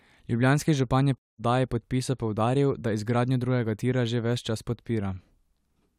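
After "župan je", at 1.20 s, the speech cuts abruptly to silence until 1.42 s. A Bluetooth dropout likely discarded late packets. Speech resumes further along, at "podpisa poudaril da izgradnjo".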